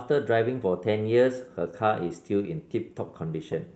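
Clock drift between sender and receiver runs through this whole speech clip: the sender's clock is about 5% slow, so the receiver's jitter buffer keeps draining and it must stretch the audio to avoid running dry. The result is small timing hiccups recurring from start to finish. Repeated timing corrections from 0.70 s to 3.68 s are how that stretching is heard: the receiver repeats small pieces, slowing playback to about 97% and adding roughly a tenth of a second overall, at uneven spacing. Scattered short gaps between 1.35 s and 2.31 s add about four brief holes, each around 10 ms, from late or lost packets. The receiver bridged each by continuing the preceding sound, filling roughly 40 ms in total and leaving small ticks or smears. The audio passed through an Opus call path with its band topping out near 8 kHz.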